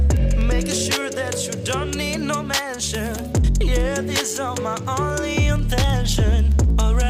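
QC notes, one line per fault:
0.1–7.07 s, word clock ticks. Steady ticks roughly every 0.07 s. Unlocked clocks drift about 300 ppm apart, slipping one sample at each tick.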